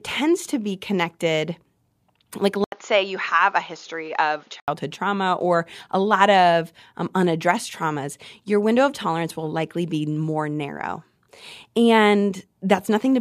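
From 2.64 to 4.68 s the input likely switched to a poorer device: after an 80 ms gap, speech turns dull, losing everything above 7 kHz, with faint new noise.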